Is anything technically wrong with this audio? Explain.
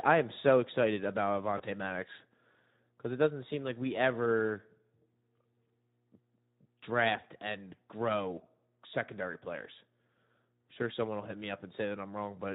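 Yes, there are two faults. Throughout, the speech carries Speex codec damage. The CELP coder has too few bits for the excitation, at a setting whose texture fits a rate near 11 kbps, so the speech sounds plainly hoarse and noisy.

From 1.57 to 1.63 s, just after "am so excited about", there is VoIP packet loss concealed by the speech codec. About 20 ms of audio went missing, and the decoder extended its last pitch and filter at falling gain. This leaves a brief, fading smear that stays weak for a moment after the audio resumes.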